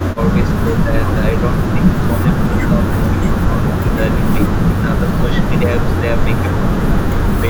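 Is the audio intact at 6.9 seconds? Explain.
Yes, at 6.9 seconds the speech is intact, with no dropout, click, distortion or other fault at that moment.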